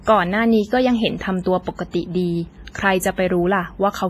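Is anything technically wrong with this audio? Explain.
Yes. Throughout the speech, the audio likely passed through WMA compression at a low bitrate, consistent with about 24 kbps. Long transform blocks smear quantisation noise over tens of milliseconds and drop weak components, so it sounds heavily ringing and washy, with breathing hiss and nothing above 15.5 kHz.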